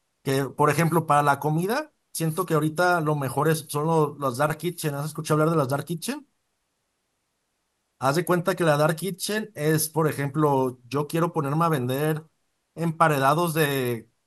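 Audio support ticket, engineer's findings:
Listened through the whole speech recording and found nothing to flag, so no findings to log on this one.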